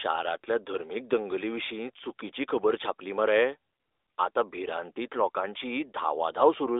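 Nothing stood out on listening to this speech.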